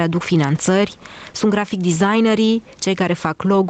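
A short speech recording carried over a call link whose content stops at 8 kHz, consistent with a wideband Opus stream at 24 kbps, shows gain pumping throughout its length. The level swings by about 10 dB. The likely cause is input gain set far too high feeding a fast limiter or compressor. Unlike a noise gate, which cuts the noise off abruptly, this gain change is smooth and continuous, and the speech itself sounds squashed.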